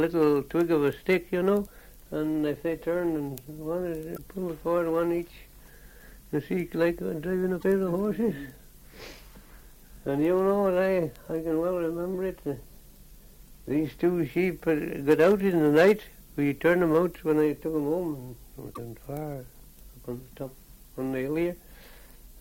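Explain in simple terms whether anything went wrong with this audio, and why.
Three brief glitches from damaged data in a compressed stream, at 4.14–4.19 s, 7.57–7.64 s and 18.71–18.79 s. Part of the stored file was corrupted there, so the decoder misread those frames and lost its place. Each is heard as a short chirp, squawk, click or brief gap.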